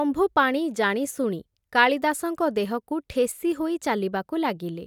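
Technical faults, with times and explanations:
No technical faults can be heard in this recording.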